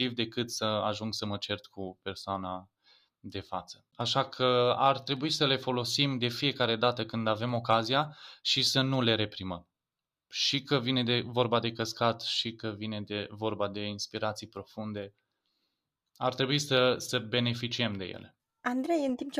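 Two device clocks likely run apart by something like 150 ppm, so the buffer between them creeps until a handful of samples is dropped or repeated. These clock drift buffer slips put a regular click into the speech roughly every 1.16 s, from 0.52 s to 19.09 s.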